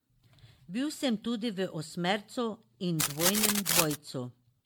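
A speech recording sounds swirly, smeared and hollow from start to finish, with consonant attacks blurred, even though the band still reaches about 20.2 kHz. That points to generation loss, likely from repeated MP3 re-encoding at 96 kbit/s, roughly ten times over, each pass adding its own quantisation noise and spectral holes. From 2.98 to 3.95 s, dense, uneven scratching and rustling sits over the speech at roughly the same level as the speech itself. This is cable scratch noise, likely a worn cable or connector being moved.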